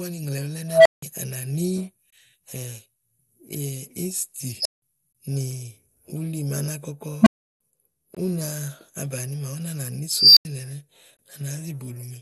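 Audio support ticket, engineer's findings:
Dull, gurgling, granular speech throughout, upper bands flickering off. Likely MP2 compression starving its 32 sub-bands of bits, which fits a 64 kbps stream. Whole bands drop out, unlike smeared MP3 pre-echo.

Unstable filter at 0.68–1.03 s (about 700 Hz), 4.57–4.82 s (5 kHz), 7.21–7.60 s (about 200 Hz), and 10.11–10.45 s (5 kHz). A recursive stage diverges: the tone swells over 50–260 ms, clips, overflows, then goes silent for 85–340 ms until it resets. The growing tone before the silence rules out plain dropouts.

Gap between chunks at 2.10 s, 8.15 s and 11.17 s. 21 ms holes at chunk joins on a 3 s grid. No audio is missing and there is no tone before each hole, unlike the filter blowouts.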